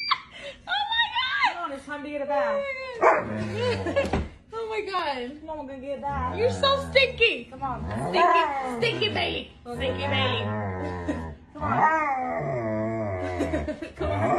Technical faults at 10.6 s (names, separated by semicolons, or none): none